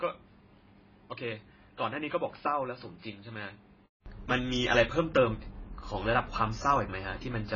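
The speech in this clip is band-limited and smeared from start to finish, with nothing above 7 kHz and a warbling, fizzy texture on sibilants and held vowels. This points to heavy AAC compression, likely AAC-LC at around 16 kbps. Unlike a device change, the dullness stays constant throughout. The opening, from 0.0 to 4.06 s, is duller and boxier still, cut off at 5.1 kHz, about 5 dB quieter, and carrying a faint separate noise floor. It then clears abruptly after a 200 ms silence, a step change that marks a likely input switched to a poorer device rather than codec loss.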